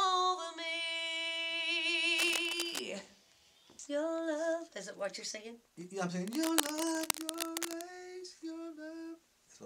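From 2.13 to 2.80 s, and again from 6.27 to 7.82 s, bursts of scratchy, rustling noise sit only a little below the sound itself. This is cable scratch noise, likely from a worn lead or connector being moved so its contact resistance flickered rapidly.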